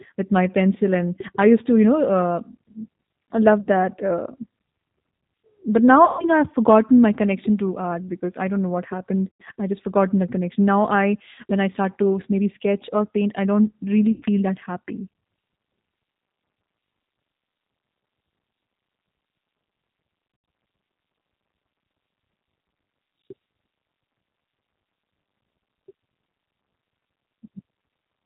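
The speech runs through the G.729 codec at 8 kbit/s for the whole clip. Nothing above 4 kHz survives. Each frame is rebuilt from a filter, a pitch predictor and a few pulses. The result sounds rough and slightly synthetic, and the damage is plainly audible.

VoIP packet loss concealed by the speech codec breaks in five times. These are at 3.60 to 3.68 s (60 ms lost), 6.05 to 6.30 s (140 ms), 9.30 to 9.42 s (100 ms) and 14.12 to 14.24 s (100 ms). The last is at 20.28 to 20.48 s, where 140 ms of loss is scattered over 200 ms, with no single gap longer than 80 ms. Each time, the decoder stretches its last pitch and filter into a buzzy tone or coloured noise that fades. The speech stays weak briefly after the gap ends.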